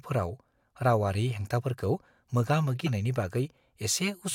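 At 2.86 to 2.88 s the speech is interrupted by a short glitch from damaged data in a compressed stream. Corrupted bytes made the decoder misread the frame there and lose sync until it found the next valid header.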